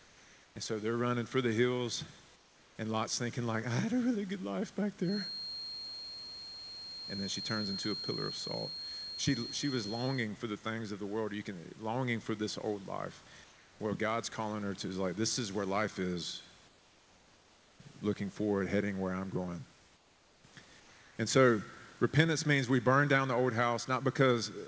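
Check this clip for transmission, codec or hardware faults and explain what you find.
There's one recurring fault: the gaps in the speech have their real background swapped out for comfort noise.

Comfort noise in place of the background shows up at 0.00–0.56 s, 2.36–2.76 s after "running for the hills", 13.44–13.80 s after "for this old life", 16.68–17.80 s after "is where life is", 19.96–20.44 s and 20.80–21.16 s. In each pause the room's real background gives way to a flat, featureless noise that's about 2 to 4 dB quieter, then the real background snaps back when talking resumes. That's likely discontinuous transmission: the sender goes quiet once its voice detector hears no speech, and the receiver fills in with synthetic noise.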